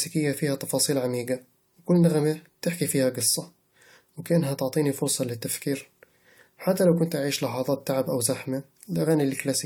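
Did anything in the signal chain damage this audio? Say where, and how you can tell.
No, nothing in the signal chain has left an audible mark on this speech recording: the level, timing and continuity of the signal hold steady throughout.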